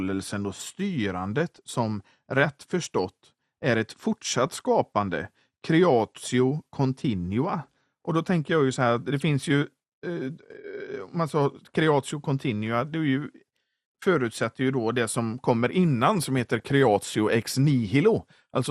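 The whole speech clip sounds dull and gurgly, with the top end thinned out. That's likely MP2 compression, at a rate that fits around 80 kbps, starving the upper sub-bands. DAB burbling then bubbles up at 1.55–1.58 s just before "som rätt förstått är", at 4.36–4.65 s after "rätt förstått är ett", at 7.61–7.87 s after "creatio continua", and at 16.60–16.71 s. Stray bit errors corrupt samples and scale factors in single bands, giving short blips of noise and jumps in level.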